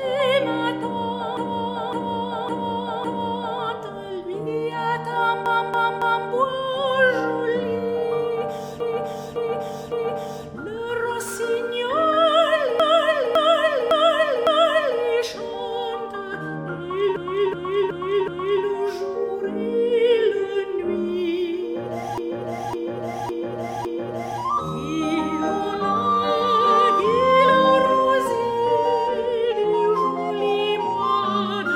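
Repeated frames make the audio stutter at 1.37–3.60, 5.46–6.30, 8.80–10.47, 12.80–15.03, 17.16–18.65 and 22.18–24.41 s. Compressed blocks of 0.28 to 0.56 s replay three or four times, lengthening playback.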